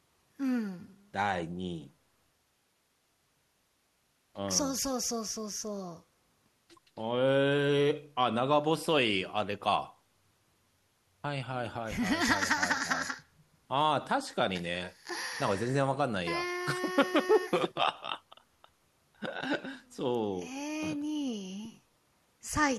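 No technical faults can be heard anywhere in the speech recording. There is nothing in it to place on a timeline.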